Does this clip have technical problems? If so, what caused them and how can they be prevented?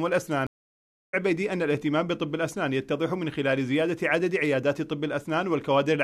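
Yes. A stream reconnect interrupts the audio at 0.47 s. The connection drops, the player falls silent for about 0.67 s, and at 1.15 s a fresh decoder picks the stream up roughly 0.7 s further along, so that stretch of sound is skipped outright. A waveform shows a flat gap and a spectrogram a blank column, with the first instant after it muted or faded in. Deeper client buffering and seamless resume-from-position reconnection would prevent it.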